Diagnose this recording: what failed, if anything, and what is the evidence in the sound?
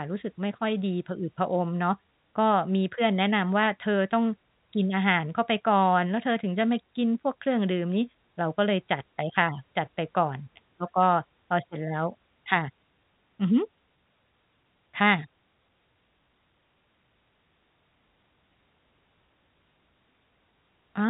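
Nothing failed: the speech carries the ordinary G.711 A-law telephone coding, with the band ending near 3.8 kHz, and no stage in the chain shows anything beyond that expected narrowband character.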